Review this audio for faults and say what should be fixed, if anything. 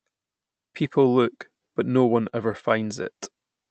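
From 2.29 to 3.27 s, right after "look but no one", the speech catches and drags in seven short holds, the longest about 24 ms, adding roughly 80 ms of stretched sound while nothing is lost. These are repeated stalls (stutter): packets arrived late or slower than playback, so the jitter buffer kept running dry and the receiver extended the last sound until audio resumed. The call codec's top end stops near 8 kHz. To prevent this, give the jitter buffer more headroom.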